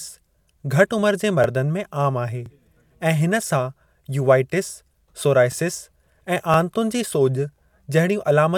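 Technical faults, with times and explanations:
0.42–0.44, 1.44–1.46, 2.46–2.48, 3.48–3.50, 4.50–4.52, 5.52–5.54, 6.54–6.56 and 7.56–7.58 s: overlapping chunks. The speech was handled in 1.0 s chunks, each starting 20 ms before the previous one ended, so the last 20 ms of every chunk plays a second time at the join. That short repeat breaks the waveform's continuity, producing a click or stutter at each boundary. Because every chunk contributes an extra 20 ms, the joins arrive every 1.02 s.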